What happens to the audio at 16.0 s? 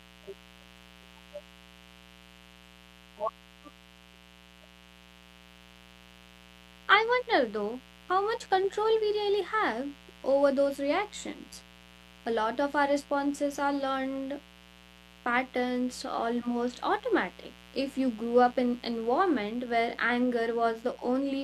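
At 16.0 s a mains buzz sits under the speech. It is not a momentary event. The buzz runs through the whole clip, so this moment simply carries it too. It is built on 60 Hz, with sharp spikes arriving twice per mains cycle, which spreads harmonics up into the kilohertz range. That gives a steady, raspy edge rather than a smooth hum. It sits roughly 25 dB below the speech.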